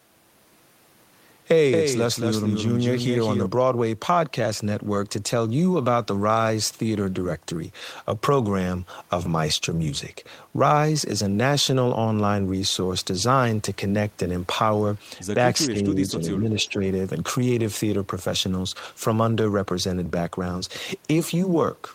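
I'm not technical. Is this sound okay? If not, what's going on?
No. From 15.65 to 16.2 s, and again from 16.41 to 16.76 s, the voice drops in level and briefly weakens. The first dip is deeper. This is speech suppressed in double talk, likely from both sides talking at once, with the call's echo control turning down everything.

Between 16.59 and 16.69 s, a faint, short copy of the voice can be heard. It arrives about 405 ms late. This is echo leak, probably from a loudspeaker on the other end whose echo control let some sound slip back.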